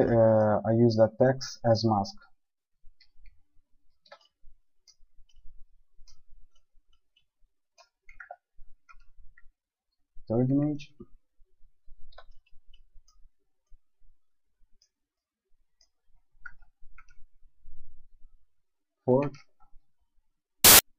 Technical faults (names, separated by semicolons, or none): file tags played as audio